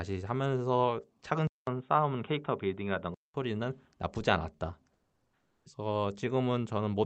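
Speech recorded over a call path, with its top end reaching about 8 kHz. From 1.47 to 3.34 s the sound turns dull and boxy, with nothing above 3.8 kHz, a short 200 ms silence at the changeover and a faint new noise floor at roughly the same level. That is likely an input switched to a poorer device. From 4.93 to 5.65 s the 720 ms pause loses its natural background, which sat about 44 dB below the loudest speech, to a steady, featureless hiss about 5 dB quieter. That is likely comfort noise in place of the background, inserted by discontinuous transmission such as Opus DTX.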